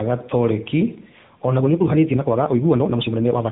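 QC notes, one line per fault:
Throughout: tandem speech coding. The call passed through several speech codecs in turn, likely including AMR-NB, and each coder re-encoded the already degraded output of the previous one. The result is rough, muffled, warbly speech with nothing above 3.8 kHz.
1.54–3.52 s: time-stretched section. Software likely squeezed this stretch to fit a length, playing it at 2.0 times the pace while dropping short pieces to hold the pitch. The speech abruptly turns rushed, with its pitch unchanged.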